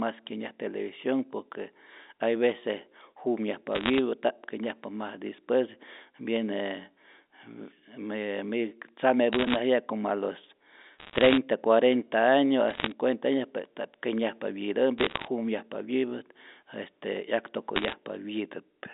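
Short bursts of crackle break through the speech six times. These are bit errors on a digital phone line. They come at 3.75 to 3.99 s, 9.33 to 9.56 s just before "como a los", 10.98 to 11.38 s right after "como a los", 12.68 to 12.92 s just before "año pues", 14.98 to 15.28 s, and 17.76 to 17.94 s. About 0.7 to 1 bit in a hundred flips. Each flip corrupts a single sample. Flips in the sign or upper bits give sharp ticks. Clustered together, they crackle over speech that stays intact beneath. All of it sits inside the narrow 250 Hz to 3.7 kHz telephone band of the line's G.711 coding.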